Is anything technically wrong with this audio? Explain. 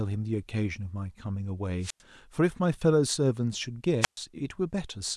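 Yes. Wireless microphone squelch dropouts occur at 1.81 and 4.01 seconds. The radio signal fades, hiss rises, then squelch mutes the speech for about 97 and 123 milliseconds.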